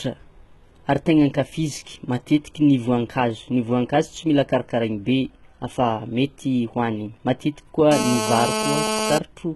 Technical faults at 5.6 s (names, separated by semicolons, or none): HE-AAC compression